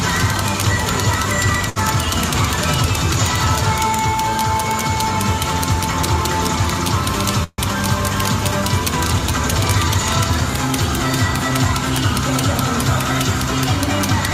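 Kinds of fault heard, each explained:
Short stall from a late packet: At 1.69 to 1.78 s, a sound is held on for about 64 ms, with a faint buzz or slight dip, and then the audio carries on from exactly where it paused. A packet arrived late, the jitter buffer emptied, and the receiver stretched the last fragment to cover the wait. Nothing is lost, but everything after this point plays 64 ms later than before.
Call audio freeze: From 7.44 to 7.60 s, the audio hangs for about 144 ms. The final sound is drawn out into a fading buzz or hiss, followed by roughly 20 ms of silence, and then playback resumes at the same point with nothing skipped. The likely cause is packets held up in transit that drained the jitter buffer, so the receiver padded the gap with the decaying last sound. The remainder of the clip now runs a further 144 ms behind.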